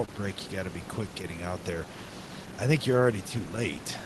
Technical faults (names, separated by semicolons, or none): clock drift between sender and receiver; short stall from a late packet